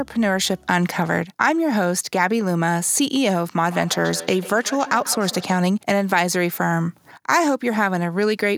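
Speech clip with feedback echo between two devices from 3.66 to 5.61 s: the sound returns roughly every 150 ms, peaking about 15 dB below the direct speech. A second device in the room replays the call audio, and the microphone recaptures it beyond its own echo canceller's reach.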